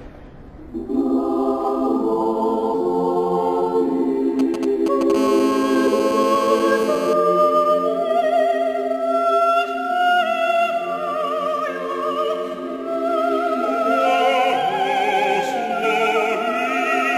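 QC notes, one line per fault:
2.70–2.74 s and 15.79–15.84 s, damaged data in a compressed stream: bad bytes made the decoder misread frames and resync, giving a brief glitch that is isolated and not periodic, unlike phone interference.
4.39–5.12 s, GSM signalling bursts: a nearby 2G phone sends short groups of radio bursts that the circuit rectifies, giving a galloping dit-dit-dit of 217 Hz buzzes around 10 dB below the signal.
5.15–7.13 s, GSM phone buzz: once the call is up, the phone transmits continuously at 217 bursts per second, giving a steady, raspy buzz rich in harmonics, about 9 dB below the signal, rather than grouped bursts.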